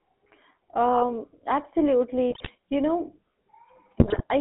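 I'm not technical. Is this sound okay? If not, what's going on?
No, not quite. The whole clip has gone through the GSM full-rate codec, the speech coding of early mobile phones. It squeezes the voice into a narrow band, roughly 250 Hz to 3.5 kHz, and rebuilds it from a simplified model, which gives that buzzy, gravelly, phone-call roughness you can hear throughout.

On top of that there are GSM bit errors, from 2.3 to 2.51 s and again from 4.0 to 4.22 s. Those are moments where a shaky phone link scrambled some of the data describing the voice, so the sound briefly breaks into squawks, pops and gargling before recovering.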